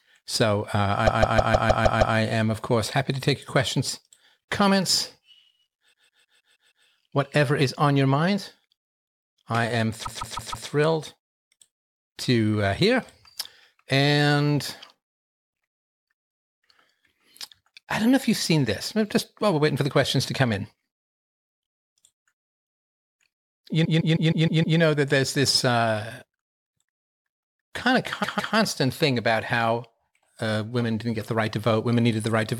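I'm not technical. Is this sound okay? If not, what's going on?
No. The clip has repeated frames in five places: 1.06 to 2.16 s, 5.92 to 6.86 s, 10.05 to 10.67 s, 23.84 to 24.78 s, and 28.23 to 28.54 s. Each time, the same short piece of about 0.16 s plays again and again, between two and seven extra times, so it sounds like a stutter. The file was written or sent with that stretch duplicated, which adds almost 4 seconds of repeated sound overall.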